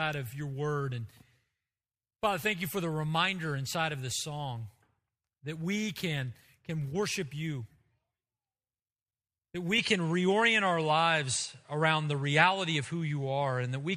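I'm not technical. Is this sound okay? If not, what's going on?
No. From 9.78 s to the end, the sound changes character abruptly, most likely because the input switched to a poorer device partway through. With no gap at the switch, the speech turns duller, losing its crispest top end above about 10.5 kHz. The loudness shifts, and a faint new background noise appears. A different microphone or headset has its own tone, volume and hiss, so the last few seconds sound like another recording.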